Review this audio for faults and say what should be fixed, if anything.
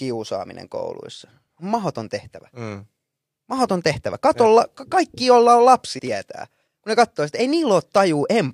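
Compressed frames skipped at 5.98 s and 7.39 s: the speech jumps ahead, losing roughly a tenth of a second, then just a few milliseconds. This fits whole frames that were missing or rejected by the decoder. A waveform shows an abrupt envelope step, and a spectrogram a vertical seam where harmonics resume out of line. Checksum the file and use error-protected transport so that no frames are lost.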